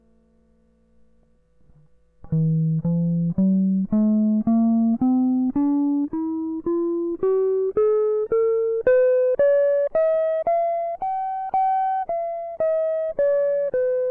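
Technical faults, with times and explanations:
Throughout: wrong sample rate. The music is being played back about 8% slower than it was captured, with no rate conversion, which fits material recorded at 24 kHz and played at 22 kHz. Speed drops to 0.919 times normal and pitch falls together with it by about 1.5 semitones, so everything sounds slightly low and dragging.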